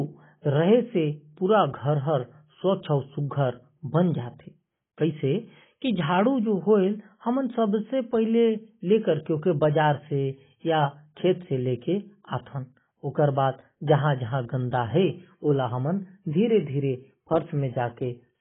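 Throughout the speech, heavy AAC compression, likely at a bitrate near 16 kbps, cuts everything above 3.8 kHz, leaving it dull, smeared and warbling.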